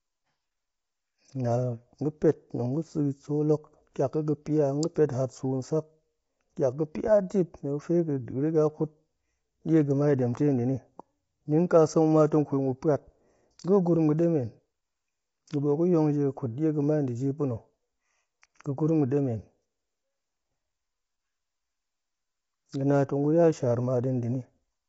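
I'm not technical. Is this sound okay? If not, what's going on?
No. Low-delay AAC compression runs through the whole clip: the speech sounds rough and grainy, and nothing comes through above about 7.8 kHz, so it lacks crispness. The likely cause is a video-call codec slicing sound into very short chunks, which blurs voice detail.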